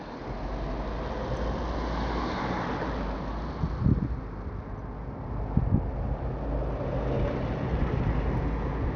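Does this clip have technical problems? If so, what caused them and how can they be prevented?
Yes. Throughout, the treble flickers and drops out under gritty noise, likely Bluetooth SBC compression starving the upper sub-bands, consistent with a low 80 kbps bitrate. Prevent it by using a wired link or a higher-bitrate codec.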